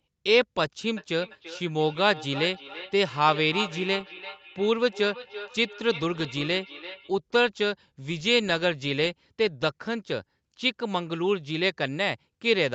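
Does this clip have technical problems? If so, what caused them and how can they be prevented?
Yes. From 0.97 s to 7.13 s the speech comes back as a thin, ringing repeat trailing each phrase by about a third of a second, at its loudest about 14 dB below the direct speech. This is feedback echo between two devices: two devices in the same room were on the call, and one played what the other's microphone sent. That microphone picked it up again, and neither echo canceller could remove sound played by the other device. To prevent it, mute the microphone and speaker on one device, or have one device join with headphones.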